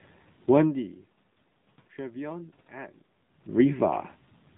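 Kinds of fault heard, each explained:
AMR narrowband mobile codec: The speech was squeezed through a narrowband mobile speech coder at a low rate, with a buzziness that fits roughly 7.4 kbps AMR-NB, so nothing above 4 kHz survives and the voice sounds plainly muffled, buzzy and synthetic throughout.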